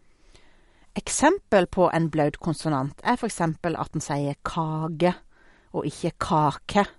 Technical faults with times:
0.00-6.99 MP3 compression

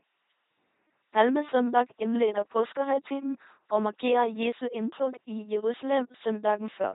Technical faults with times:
0.00-6.94 LPC-10 vocoder

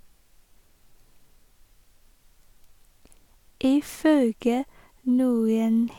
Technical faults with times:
none

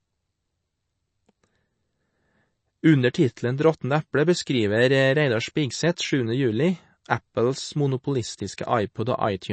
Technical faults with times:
0.00-9.53 MP3 compression

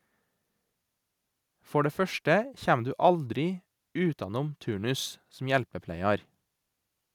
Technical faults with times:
none

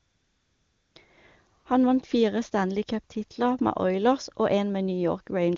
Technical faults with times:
0.00-0.95 AMR comfort noise
1.59-1.65 AMR comfort noise

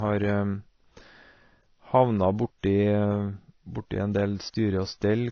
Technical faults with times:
0.00-5.31 transcoding between lossy codecs

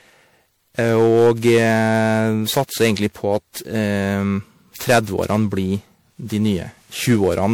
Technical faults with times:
0.00-7.53 generation loss
0.79-2.20 hard clipping
7.08-7.46 hard clipping

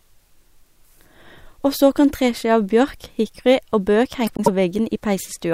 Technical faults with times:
4.27-4.48 frames out of order

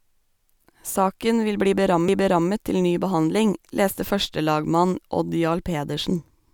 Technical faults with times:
2.08 CD skip

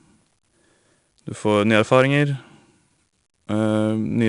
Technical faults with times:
0.00-4.29 4-bit ADPCM compression

